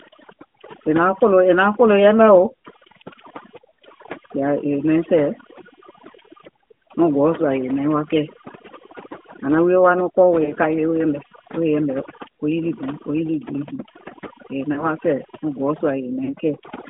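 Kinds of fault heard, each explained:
computer activity noise: Shifting processor and peripheral load disturbs the audio circuit's shared ground, injecting a buzzing pulse train near 200 Hz, fairly loud at around 10 dB under the voice, that chirps and scratches with the computer's activity rather than following the speech.
overdone noise removal: An overly aggressive noise reduction stage cuts individual frequency bands down wherever they resemble its noise estimate, taking quiet voice detail with them. Pauses fall to near silence scattered with twinkling specks.
AMR narrowband mobile codec: The speech passed through the AMR-NB mobile codec, which rebuilds the voice from a vocal tract model and sparse pulses. The buzzy, synthetic quality points to a mid-rate mode around 10 kbps. The band runs only from 200 Hz to 3.6 kHz.
lost AMR speech frames: Corrupted frames made the decoder repeat its last good settings at falling gain. 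Brief dips and warbles occur at 10.44 to 10.53 s and 14.74 to 14.85 s, and a longer drawn-out fade at 16.24 to 16.35 s, each followed by a weak or rough recovery.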